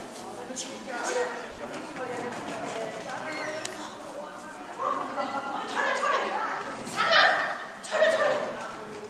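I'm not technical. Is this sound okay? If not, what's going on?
No, it has two brief glitches.

From 1.51 to 1.61 s there is a short stall from a late packet. One piece of the audio arrived late, so the player held the last sound for about 70 ms while it waited, then carried on from exactly where it stopped. Nothing is lost. You hear a sound drawn out too long, maybe with a faint buzz. A true dropout would leave a gap or skip ahead instead.

From 8.56 to 9.04 s there is a jitter buffer speed-up. The player had built up extra waiting audio and trimmed it away in many tiny snips, a few tens of milliseconds in total. That made the sound run at about 107% speed for that half second. The pitch stays the same, which is what separates it from a sped-up tape, but it sounds slightly rushed.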